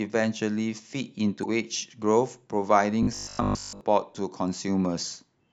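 A speech clip with two distinct faults. From 1.40 to 1.46 s there is a short glitch, the sign of damaged data in a compressed stream: corrupted bytes made the decoder misread frames, lose sync and skip ahead to the next valid header. Between 3.03 and 3.81 s the speech turns into a rigid metallic buzz at 50 Hz that only loosely tracks the syllables. This is robotic sound from repeated short buffers, likely caused by audio arriving too slowly so that the last 20 ms of signal was looped in place of most of the real material over that stretch.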